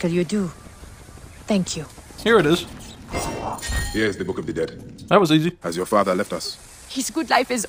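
At 2.87 s the pace jumps abruptly and stays faster through to the end of the clip, running at 1.4 times the earlier rate while the pitch holds steady. This time-stretched section was likely made by software squeezing the audio to fit a shorter length, dropping short slices to keep the pitch. It sounds rushed. On a spectrogram, harmonic spacing stays the same but events crowd closer together; the waveform shows compressed envelopes with small seams where pieces were cut.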